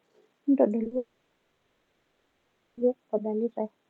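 At 0.83 to 0.87 s and straight after at 0.87 to 0.93 s, the speech smears and wobbles briefly. This is short concealed packet loss: about 20 ms and then 40 ms of audio arrived too late, and the receiver filled each gap by extending the preceding sound before blending back.

From 0.97 s to 2.79 s a buzzy continuation of the last sound takes over and fades, with some synthetic fill remaining rather than true silence, and speech resumes with the intervening 1.8 s gone. This is most likely a long network dropout, with the receiver concealing the entire gap.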